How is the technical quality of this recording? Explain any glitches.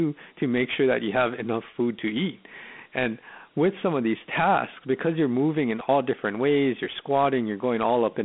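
Quality is limited by one fault present throughout the clip. Dialogic VOX ADPCM: 4-bit coding, which fits a 32 kbps stream, adds a gritty hiss that follows the speech, with the band confined to 200 Hz to 3.5 kHz and nothing above 3.8 kHz.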